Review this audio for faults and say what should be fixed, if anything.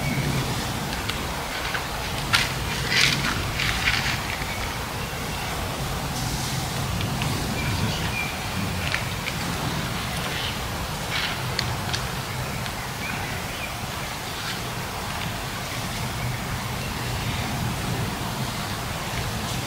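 Nothing stood out on listening, so there is nothing here that needs fixing.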